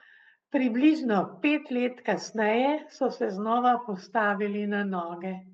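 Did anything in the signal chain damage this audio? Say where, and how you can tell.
No, nothing in the chain damaged this speech: it came through a WebRTC call path whose Opus coding tops out at about 8 kHz, consistent with a bitrate around 24 kbps, and no stage added any audible fault.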